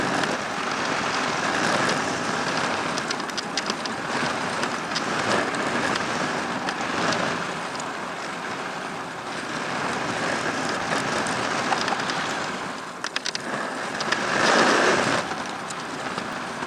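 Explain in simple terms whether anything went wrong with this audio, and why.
Compressed frames skipped, at 0.54 s, 15.21 s and 16.33 s. At each point the audio suddenly jumps ahead, losing about a tenth of a second at the first two and about two tenths at the last. The file stores sound in short chunks, which sound here like about 93 ms each. Some chunks were missing or rejected as damaged, so the player skipped them.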